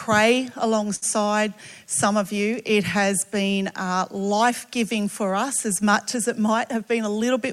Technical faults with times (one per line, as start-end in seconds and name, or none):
0.95-1.04 short stall from a late packet
6.40-6.99 jitter buffer speed-up